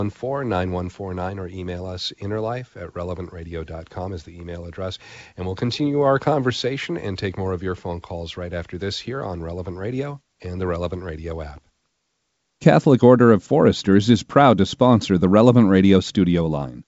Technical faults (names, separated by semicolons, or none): none